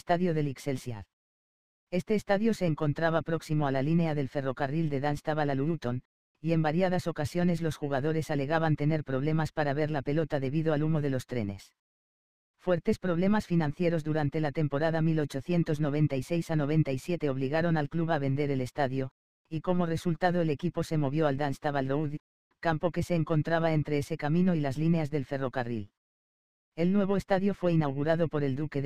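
Periodic clock jitter runs through the whole recording, from start to finish. The converter's sampling clock was being pushed back and forth at a steady rate of around 2 kHz, so every component of the sound picks up copies just above and below itself at that spacing. Higher-pitched content is hit hardest, giving a rough, metallic edge that rides on the sound and disappears whenever the audio falls silent.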